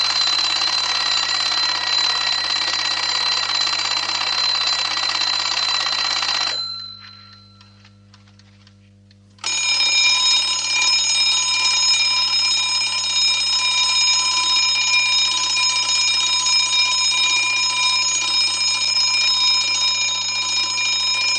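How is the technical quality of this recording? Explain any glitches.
A steady low 50 Hz drone sits under the sound for the whole clip, fairly quiet but constant. This is mains hum, from a ground loop or a nearby transformer leaking power-line current into the signal path.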